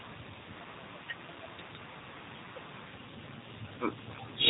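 From start to finish the speech has the plainly audible G.729 codec sound: nothing above 4 kHz, and a rough, slightly synthetic edge, because the voice is rebuilt from a vocal tract model and a few pulses per 10 ms frame. It fits a low 8 kbit/s VoIP stream.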